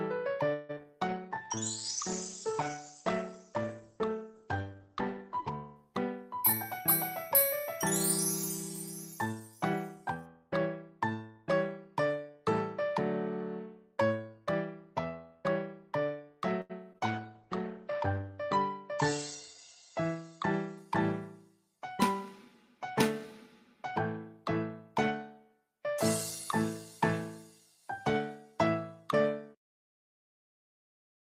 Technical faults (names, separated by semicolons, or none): repeated packet loss (robotic sound); call bitrate drop; jitter buffer slow-down; jitter buffer speed-up